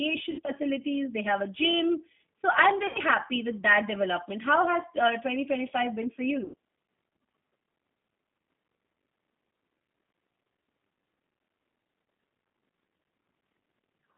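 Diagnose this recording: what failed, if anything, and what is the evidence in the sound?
The codec stage: this speech runs through the G.729 codec the whole way, boxed into 200 Hz to 3.6 kHz, rough and synthetic, which fits an 8 kbit/s line.

The network stage: VoIP packet loss concealed by the speech codec at 0.31–0.52, 2.87–2.99 and 6.44–6.54 s. The decoder stretches the last sound into a fading buzz or coloured noise, then recovers slowly.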